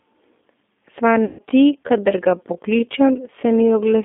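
The whole thing has come through a G.729 codec, and you can plainly hear it: everything's squeezed into a narrow line band of roughly 200 Hz to 3.6 kHz, and the speech has that slightly rough, synthetic edge you get when an 8 kbit/s coder rebuilds the voice from a filter, a pitch predictor and a few pulses.

From 1.05 s to the end, the pace suddenly drops to about 0.645 times normal speed while the pitch holds steady. That's likely a time-stretched section, where short chunks get repeated to pad the length, so the slowed speech drags.

Between 1.25 s and 1.43 s there's VoIP packet loss concealed by the speech codec. About 140 ms of audio is missing, which fits seven 20 ms packets. The decoder fills the gap by running on from its last pitch and filter, so the sound stretches into a buzzy tone or coloured noise that fades. It stays weak or distorted for a moment after the packets come back.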